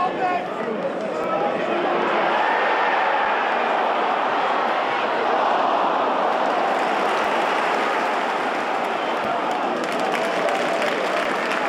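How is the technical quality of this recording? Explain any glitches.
The recording has one recurring fault, periodic USB or driver dropouts. From 1.23 s to 11.25 s, about seven brief gaps fall every 2.0 s, each a few milliseconds of silence. A background task stalls the USB bus or audio driver at a fixed interval, so samples are lost and the gap is filled with silence. Each gap sounds like a small regular tick. A waveform shows evenly spaced flat notches, and a spectrogram shows thin vertical broadband lines.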